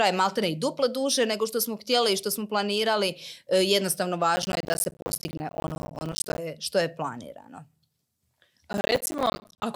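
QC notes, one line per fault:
4.36–6.38 s and 8.73–9.63 s: processor overload crackle. Many buffer deadlines are missed in a row, each leaving a short silent gap with hard edges, consistent with buffers of around 10 ms. The rapid dropouts merge into a gritty crackle over the speech.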